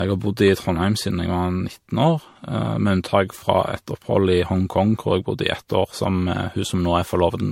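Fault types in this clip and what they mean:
Generation loss: the speech sounds swirly, hollow and smeared throughout, with consonant attacks blurred, more degraded than a single MP3 pass near 70 kbit/s would leave. This likely comes from around five successive MP3 decode and re-encode passes, each quantising on a shifted frame grid so the errors stack. On a spectrogram there is a hard ceiling with nothing above 16.4 kHz and patchy holes in the upper bands, and on the waveform transients look softened and pre-echoed.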